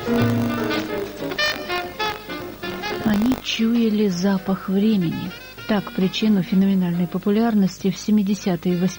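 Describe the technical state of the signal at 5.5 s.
At 5.5 s you're hearing video or display buzz, and it runs through the whole clip rather than just that moment. A screen or video cable is leaking into the audio path, so there's a 50 Hz buzz locked to the picture's field rate, with a gritty hash on top and a thin whine at 15.6 kHz from the line scan. It sits around 25 dB under the signal, so it's low.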